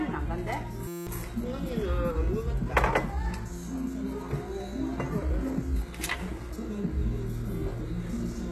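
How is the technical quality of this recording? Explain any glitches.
Technical quality is poor in two ways: a coarse, processed top end throughout, and one brief buzzing glitch near the start.

Throughout the clip, the treble sounds bright but synthetic, with gritty, metallic edges on sharp, hissy detail, and nothing at all above about 12.3 kHz. This is likely HE-AAC compression at a low bitrate around 16 kbps. The codec codes only the lower spectrum and fabricates the upper bands by copying lower ones upward under a rough envelope. The result is treble whose harmonics don't match what lies beneath it.

From 0.88 to 1.07 s, the sound turns into a steady, pitched buzz at about 172 Hz. This is a system hang loop. Playback stalled while the audio hardware kept replaying the same 5.8 ms slice of its ring buffer, which fits a 256-sample buffer, over and over. Because the repeated piece is so short, the repetition fuses into a tone rather than a stutter, and roughly 200 ms of the real audio is lost.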